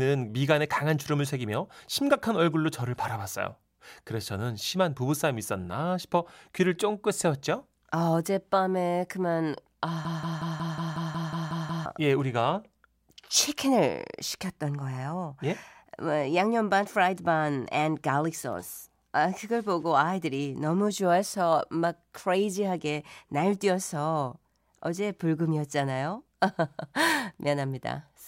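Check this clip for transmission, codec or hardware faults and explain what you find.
One fault is present. From 10.05 to 11.86 s, a broken-record loop repeats a 182 ms fragment ten times back to back, likely from a stalled stream resending its last buffer. The speech due there is lost.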